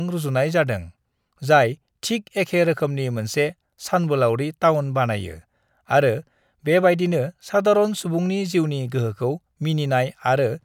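No technical faults can be heard anywhere in the recording.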